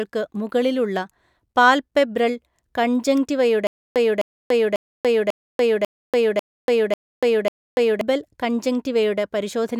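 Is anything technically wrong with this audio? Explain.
Yes. From 3.67 s to 8.01 s there is a stutter with silent gaps. The playback or stream likely stalled, and on each retry it replayed the last buffered fragment before running dry again. The result is a 0.26 s burst of the same speech heard eight times, each followed by about 0.29 s of digital silence, repeating every 0.54 s at a steady pace. The speech that should have filled those four seconds is missing.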